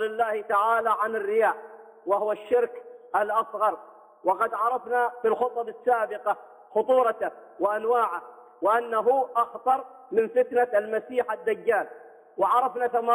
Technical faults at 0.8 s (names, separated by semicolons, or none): imaging from linear upsampling